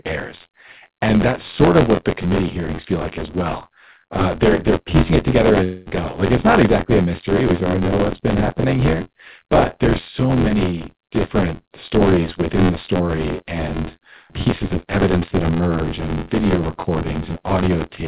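Throughout the speech, buffer tearing: the writing program and the reading hardware have slipped, so roughly a fifth of each buffer replays audio about 20 ms old. That gives a rattling buzz near 86.1 Hz, which fits a 512-sample buffer, heard over the telephone-narrow band that stops at 4 kHz. From 5.64 to 5.88 s, a long network dropout is the likely cause: packets stopped arriving, and the receiver stretched the last sound into a fading buzz or hiss lasting 220 ms before the speech resumes with that stretch missing.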